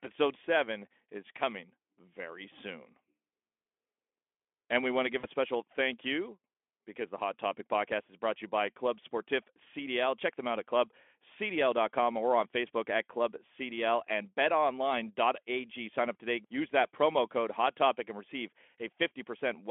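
Speech over a narrowband Speex link, roughly 250 Hz to 3.4 kHz, with one VoIP packet loss concealed by the speech codec from 5.20 to 5.27 s: about 40 ms went missing, which fits two dropped 20 ms frames, and the decoder smears it over with a fading extension of the last sound, a buzzy tone or coloured noise, that takes a moment to recover.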